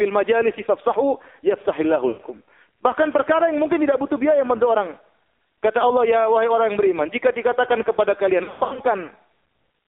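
The whole clip passes through the AMR narrowband mobile codec at a very low bit rate, one that fits the lowest modes near 5.9 kbps. Each frame is rebuilt from a coarse vocal-tract model, so the speech is confined to roughly 300 Hz to 3.6 kHz and sounds heavily buzzy and synthetic.

At 2.08 s, just after "majalisi fafsahu yafsahillahu", lost AMR speech frames leave about 120 ms in which the decoder keeps repeating the last good settings at falling gain. The sound smears and fades out until 2.21 s. At 8.44 s, after "beriman jika dikatakan kepada", losses scattered over 320 ms, totalling about 240 ms and with the longest run 100 ms, produce stuttering warbles and dropouts until 8.80 s.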